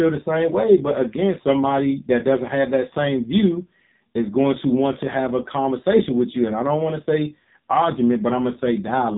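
Throughout, heavy AMR narrowband mobile codec damage cuts the spectrogram off at 3.8 kHz, and the sparse pulse excitation makes the speech buzzy and synthetic, suggesting roughly 6 kbps.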